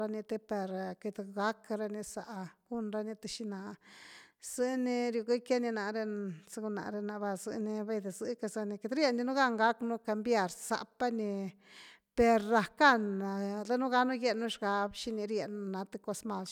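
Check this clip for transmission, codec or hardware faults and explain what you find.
Nothing in this speech recording points to a fault. There is nothing to report at any point in it.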